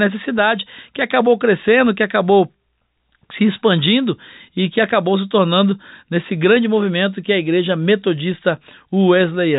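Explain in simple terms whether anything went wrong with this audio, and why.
Nothing went wrong here.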